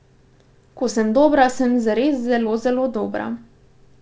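A brief smear just after "sem dobra sem zares", at 2.44 to 2.47 s, is short concealed packet loss: about 20 ms never arrived, and the receiver patched the gap by extending the preceding sound.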